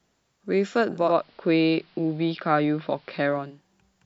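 A hybrid receiver lost its digital signal at 0.90 s and cross-faded over about 0.38 s to the station's AM analogue broadcast, returning to digital at 3.64 s. This speech clip therefore shows digital radio blending to analogue: faint hiss well below the speech, and a level shift of about 1 dB during that stretch.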